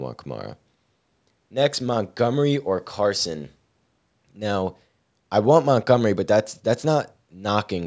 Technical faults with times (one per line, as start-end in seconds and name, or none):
none